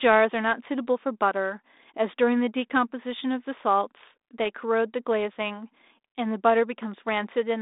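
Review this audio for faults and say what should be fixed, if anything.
No faults found; nothing here needs fixing.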